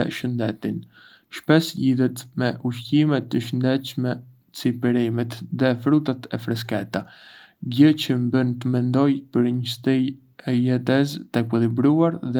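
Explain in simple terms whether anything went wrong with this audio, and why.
Nothing went wrong here, as far as the ear can tell: the speech comes across steady and intact the whole way, with no glitch, gap or odd sound to point to.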